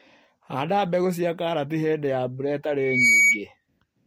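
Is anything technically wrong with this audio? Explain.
Yes. From 2.77 s to 3.43 s there is loudspeaker feedback squeal. A steady tone at 2.3 kHz rises over about a third of a second and settles at about 10 dB above the speech before it stops. The microphone is picking up the loudspeaker it drives, and at 2.3 kHz the loop gain exceeds unity, so that one frequency keeps reinforcing itself. The result is a piercing single-pitch whistle over the speech.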